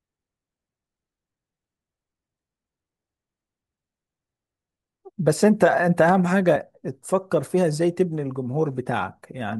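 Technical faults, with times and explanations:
6.08 s, chunks out of order: a very short slice of the speech, about 5.8 ms long, plays one chunk late, after the chunk that should follow it. Nothing is missing, but the two short pieces are swapped, leaving three hard joins within about 11 ms. Each join is a discontinuity in the waveform, so the moment sounds like a brief jumble rather than a gap.
6.55 s, compressed frames skipped: roughly two whole frames of the encoded stream, each 23.2 ms, are not played, so around 50 ms of speech vanishes and the audio jumps ahead. It is a brief jump where the sound lurches forward slightly.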